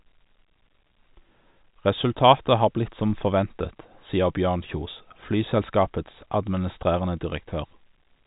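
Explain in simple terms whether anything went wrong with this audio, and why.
Nothing went wrong here; this speech has the slightly narrow, phone-call sound you'd expect from an ordinary landline-style telephone connection, and that's just how that kind of line carries sound rather than a problem.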